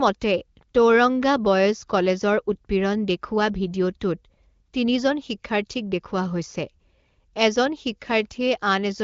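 A speech recording, and nothing is technically wrong with it; it is carried by the AMR wideband (HD Voice) codec at 15.85 kbit/s, a rate high enough for that codec to keep speech clear.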